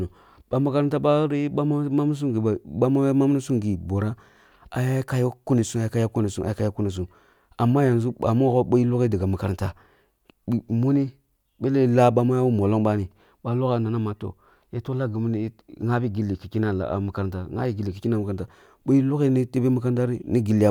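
No technical faults can be heard anywhere in the recording. Nothing in the speech points to a problem in how it was captured, processed or delivered.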